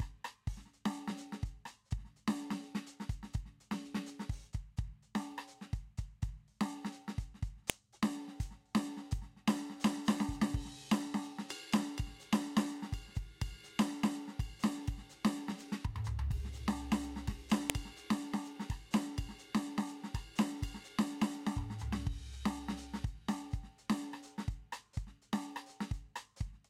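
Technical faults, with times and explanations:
7.70 s and 17.70 s, file header played as audio: you get a sharp, loud snap at each of these points, landing exactly 10 s apart no matter what the music is doing. That spacing suggests the stream was stitched from 10-second WAV pieces and nobody stripped the header off each new piece, so those few dozen bytes of file metadata get read as sample values. They're essentially random numbers jammed into the waveform, hence the abrupt click.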